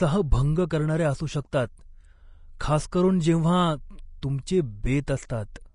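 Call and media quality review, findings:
Hissy, grainy treble with roughened tones and nothing above 10.6 kHz throughout; likely Vorbis compression at a low rate, consistent with roughly 34 kbps, with coarse treble quantisation turning detail into noise.

Pre-echo: brief hiss smearing attacks at 2.59 s (just before "खास करून जेव्हा तुमचे"), 4.22 s (after "खास करून जेव्हा"), 5.07 s and 5.29 s; transform-block quantisation noise spreading about 10 to 12 ms ahead of each onset.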